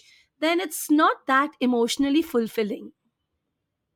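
No technical faults can be heard anywhere in the speech.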